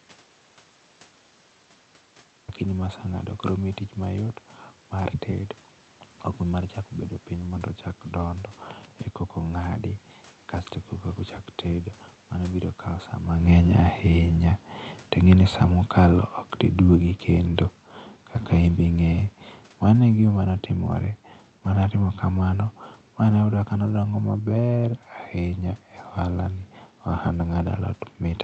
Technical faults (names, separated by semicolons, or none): audio dropout to silence; automatic gain falling